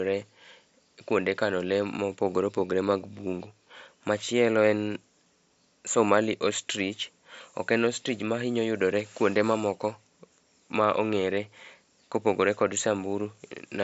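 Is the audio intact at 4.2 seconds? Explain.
Yes, the audio is intact at 4.2 seconds, with no fault at that moment.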